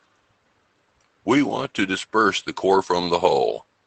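At 1.91 to 1.93 s and again at 3.01 to 3.03 s, each time what sounds like a single lost packet is covered by a lost packet rebuilt from error correction. The decoder plays the low-bitrate copy carried in the next packet, so there is no gap, only a brief 20 ms patch of rougher, noisier sound. Everything passes through the Opus call path, whose band limit is near 8 kHz.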